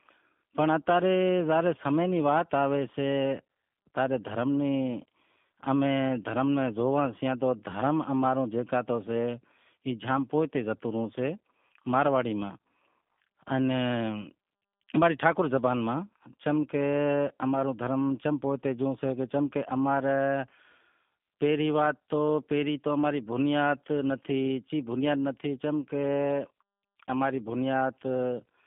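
G.729 codec damage runs from start to finish, with a bandwidth that fits an 8 kbit/s G.729A voice link: the speech sits within roughly 150 Hz to 3.5 kHz. The codec resynthesises it from a vocal-tract filter, pitch predictor and sparse pulses, which leaves it plainly rough and synthetic.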